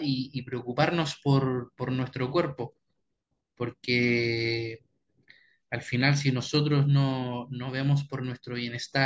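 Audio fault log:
No audible faults found in this speech recording.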